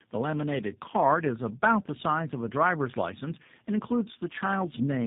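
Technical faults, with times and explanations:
Throughout: tandem speech coding. The speech sounds like it passed through two low-rate speech codecs in series, which fits a GSM full-rate 13 kbit/s leg, then a G.711 A-law 64 kbit/s link, then G.729A at 8 kbit/s. The second coder models speech that the first had already distorted, so the errors compound. The result is rough, warbly and muffled speech, with nothing above about 3.8 kHz.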